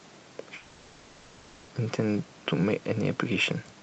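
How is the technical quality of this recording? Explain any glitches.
The recording has one clear glitch, a gap in the speech heard through a call-style codec whose top end stops around 8 kHz. From 0.57 to 1.71 s, about 1.1 s of the speech disappears: the last sound smears into a fading buzzy hiss, never full silence, before speech resumes with the missing stretch skipped. This is likely a long network dropout, with the receiver filling the gap by stretching out the audio it last received.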